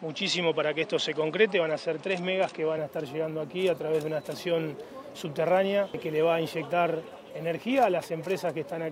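From the start to 2.78 s the sound is slightly dull, with nothing above 9.2 kHz and a faint added hiss far below it, likely an input switched to a poorer device. A spectrogram shows a flat ceiling that lifts at 2.78 s, with no gap and no level step in the waveform.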